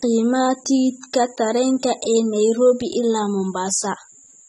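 Across the whole clip, the speech has likely passed through AAC compression at a low bitrate, one that fits about 27 kbps AAC-LC. The encoder discards everything above 11.8 kHz and quantises the remaining spectrum coarsely, leaving the sound plainly dull and smeared, with a fizzy edge on sibilants.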